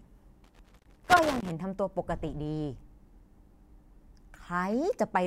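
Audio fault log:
0.44–1.51 s, loose connector crackle: an irregular burst of scratchy crackle runs over the speech for about a second. A worn or dirty contact is making and breaking as it shifts, chopping the signal on and off.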